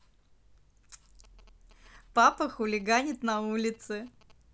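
GSM signalling bursts run from 1.24 to 4.32 s: a nearby 2G phone exchanging short radio bursts with its network, rectified by the audio circuitry into galloping dit-dit-dit ticks and brief 217 Hz buzzes, sitting roughly 30 dB beneath the speech.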